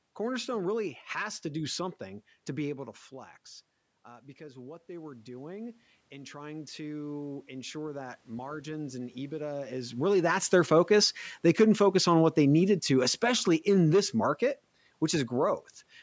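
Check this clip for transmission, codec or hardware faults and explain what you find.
Two automatic gain control faults are present, each a slow level ride rather than a codec or hardware defect.

Automatic gain rising, 4.02 to 9.88 s: after the talker moves away around 2.5 s and the input drops by about 15 dB, the control lifts its gain by about 11 dB over several seconds. Voice and room noise swell together, which separates it from a talker simply leaning closer.

Automatic gain falling, 10.01 to 14.43 s: the talker moves again around 9.5 s, the input is now too loud or too noisy for the raised gain, and the control backs off by about 6 dB. The speech starts loud and then sinks, with the background sinking in step.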